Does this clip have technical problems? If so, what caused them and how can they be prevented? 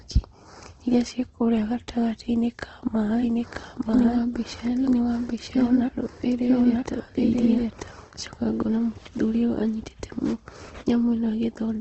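Yes. Throughout, the speech sounds grainy and rough, with nothing above 8.2 kHz. This is likely Opus compression in its music mode, at a rate that fits about 16 kbps. Encoding at a higher bitrate prevents it.

From 3.2 to 7.9 s, a doubled audio track plays: a second copy of the speech, about as loud, runs roughly one second behind and starts and stops abruptly. It likely comes from a second capture path or an edit holding two copies. Muting duplicate inputs and checking edits for overlapping copies prevents it.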